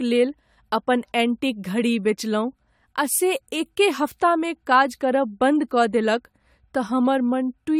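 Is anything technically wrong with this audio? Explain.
Yes, generation loss runs through the whole speech clip. It sounds swirly, smeared and hollow with blurred onsets, likely from repeated AAC re-encoding, perhaps seven passes at around 96 kbit/s. A spectrogram would show flickering holes below a 20 kHz cutoff.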